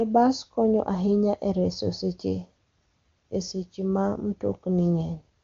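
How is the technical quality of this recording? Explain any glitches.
The technical quality is good, and there are no glitches to explain.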